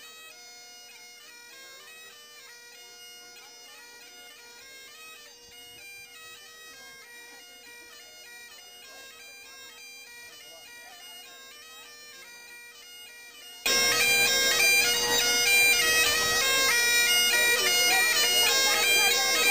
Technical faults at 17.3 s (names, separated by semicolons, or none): none